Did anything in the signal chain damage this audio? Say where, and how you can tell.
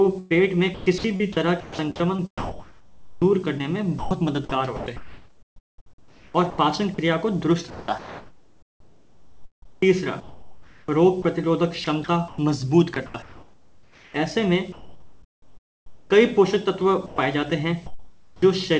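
Yes. The damage is in the call processing, most likely the sender's voice activity detection with comfort noise, and sits on top of a call path whose spectrum stops at 8 kHz, as G.722 does.

Sound chopped by the voice detector runs through 0.02 to 6.98 s, 7.70 to 11.24 s, 11.84 to 12.38 s and 12.94 to 14.14 s. Within them about 3.2 s, 2.7 s, 0.16 s and 1.0 s respectively are replaced. The detector is likely toggling transmission on and off, so quiet stretches switch to synthetic fill. On a spectrogram the detailed background alternates with smooth, featureless noise in patches, and the waveform shows abrupt texture changes at each switch.

Comfort noise in place of the background appears from 14.72 to 16.10 s and from 17.86 to 18.42 s. With nothing being sent, the receiver likely generated noise shaped roughly like the real background, which sits about 33 dB below the loud parts. The fill is about 7 dB and then about 12 dB quieter than the real ambience. 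A spectrogram shows a uniform, structureless noise floor, and the waveform shows a lower, steadier envelope than the background around it.

Sound dropped by the voice detector takes out 120 ms at 17.06 to 17.18 s. The detector likely mistook a quiet part of the sound for background and stopped sending, and comfort noise filled the hole. On a waveform the signal collapses to a flat low-level band for that instant. On a spectrogram a short vertical strip of the sound's energy is missing, with bland noise in its place.

An onset clipped by the voice detector comes at 18.29 to 18.42 s, where 130 ms of the start is lost. The detector was likely slow to register that sound had resumed, so the soft beginning was never sent and comfort noise stood in. The sound then begins abruptly. The waveform shows a hard step up from the noise floor instead of a gradual rise, and the spectrogram shows energy appearing at full strength with no attack.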